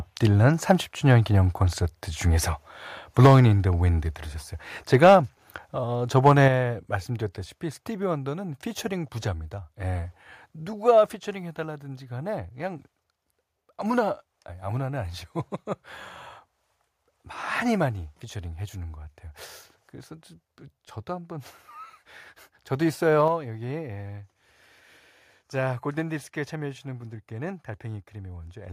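Microphone overload crackles harshly on the loudest peaks at 1.11–1.13, 3.2–3.4, 4.93–5.15 and 6.26–6.47 s, up to about 7 dB over, likely from input gain driving the converter past full scale. Unlike a level drop, the peaks distort. A microphone volume stepped down occurs at 3.26, 6.48, 11.16 and 23.28 s. Voice and background fall together by about 3 to 6 dB, likely the call software lowering device gain in one step.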